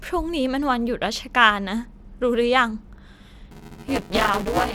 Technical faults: buffer tearing

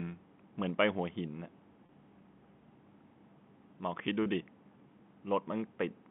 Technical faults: packet loss with pitch repetition

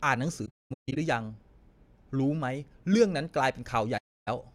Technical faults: AAC frame loss with muting

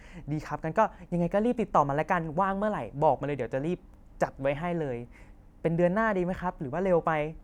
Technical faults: none

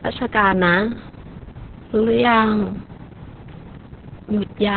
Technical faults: Opus voice compression

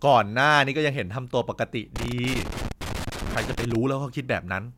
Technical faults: loose connector crackle

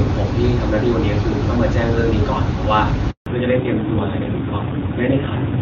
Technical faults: handover gap; fallback to narrowband

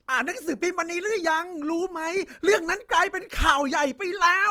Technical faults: Opus compression

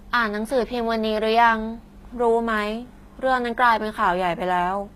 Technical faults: HE-AAC compression

